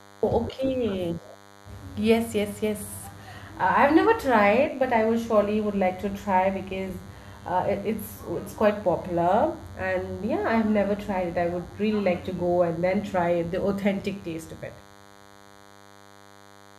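A thin, steady buzz sits under the speech from start to finish, pitched at 100 Hz and edged with a dense stack of harmonics that give it a rasping, electrical quality, about 25 dB below the speech. This is DECT cordless phone buzz: a nearby handset or base station transmits a short radio burst every 10 ms, and the audio circuitry rectifies those bursts into a 100 Hz pulse train.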